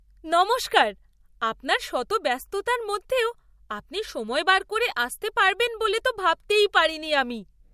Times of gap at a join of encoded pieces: none

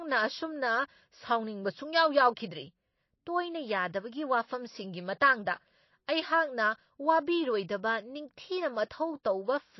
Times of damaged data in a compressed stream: none

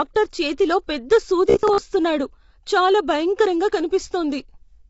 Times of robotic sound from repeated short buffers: 1.50-1.81

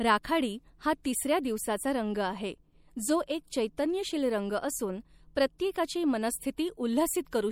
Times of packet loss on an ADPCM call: none

